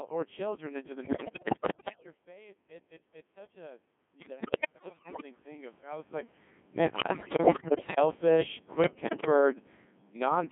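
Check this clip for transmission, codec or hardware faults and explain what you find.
Three faults are present: mains hum, Codec 2 vocoder coding, and four bursts of bit errors on digital voice radio.

Mains hum runs through the whole recording. It is a steady low tone at 50 Hz, sitting roughly 25 dB below the speech. A ground loop or nearby transformer is leaking the power line into the signal path. It adds a dull drone under everything.

Codec 2 vocoder damage is also continuous and heavy. The speech sounds robotic and buzzy, which fits the 1.6 kbit/s mode. The band is squeezed to roughly 150 Hz to 3.5 kHz. The codec sends only pitch, voicing, level and a rough spectral shape, and the decoder rebuilds the sound from sine waves. The original waveform is lost, so the speech sounds synthetic throughout.

Bit errors on digital voice radio hit four times: 1.04 to 2.06 s, 4.2 to 5.23 s, 6.96 to 8.0 s, and 8.84 to 9.26 s. 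The first three are heavier. The last is shorter and milder. Corrupted bits feed wrong pitch, level and spectrum values into each frame. The speech jumps in pitch and loudness, warbles, and breaks into bleeps and gibberish. A level change near 1.5 s overlaps the first burst but comes from the talker moving.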